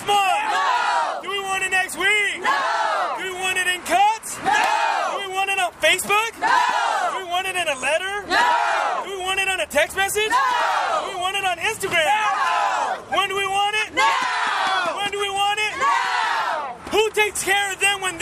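No technical faults are audible.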